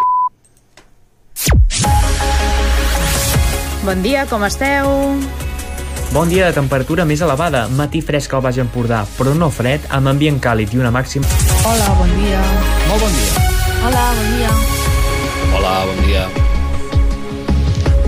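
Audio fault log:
11.22 s, stream segment skipped: the sound lurches abruptly forward with a brief blip, so continuity breaks and a stretch of the programme never arrives. The likely cause is one stream segment failing to load, with the player simply moving on to the next.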